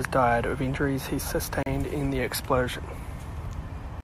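At 1.63 s the speech stops for 34 ms with hard edges. This is a gap between stream segments: timestamps leave a hole, filled with silence. Nothing is lost.

From 2.03 s to the end, computer activity noise appears. Processor or graphics load disturbs the shared audio ground, giving a faint buzz pulsing about seventy times a second.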